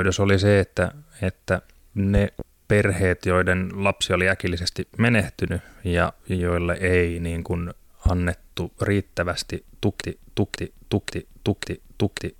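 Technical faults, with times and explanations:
2.17 to 2.43 s and 8.06 to 8.10 s, loud pop: A sudden voltage step or spike, likely from a plug, switch, static discharge or driver glitch, entered the signal path, and the circuits after it shaped it into a brief pulse. The first event is a pair of sharp pops about 10 dB above the speech. The second is a single, harder pop about 15 dB above it. In both, the speech carries on underneath.
10.02 s to the end, broken-record loop: The player, encoder or stream likely stalled and kept resending the last fragment it held. The result is a 0.54 s piece of audio repeating exactly, back to back, four times until the clip ends. Whatever should have followed in those final seconds is missing, and the stutter has a rigid, mechanical rhythm.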